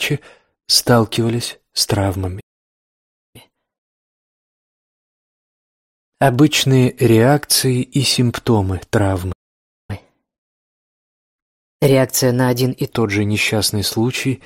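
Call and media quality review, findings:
Playback stall, 2.40–3.36 s (about 0.94 s) and 9.32–9.90 s (about 0.56 s): audio halts mid-flow, silent, then resumes. Likely player buffer underrun or blocked playback thread. Unlike a packet-loss dropout, no content skipped.

Catch-up at higher speed, 3.36–6.36 s at 1.1x (pitch up about one and a half semitones) and 9.90–12.90 s at 1.15x (about two semitones): player resampling its backlog. Temporary, each ending 3 s after its stall, unlike a constant sample-rate mismatch.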